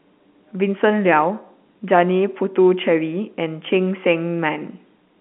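No technical faults can be heard in this speech recording. The G.711 telephone coding it passes through is audible as a narrow line band of about 200 Hz to 3.4 kHz.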